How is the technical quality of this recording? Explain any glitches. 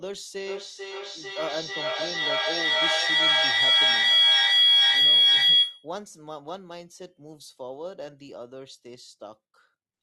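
The recording has one serious problem: a feedback howl from 0.43 s to 5.95 s. Two devices sharing the call in one room formed a microphone-to-loudspeaker loop that gained level on each pass, so repeats built up instead of fading and narrowed to a shrill tone around 3 kHz. The loop delay is roughly 400 ms, and the howl peaks about 16 dB above the speech.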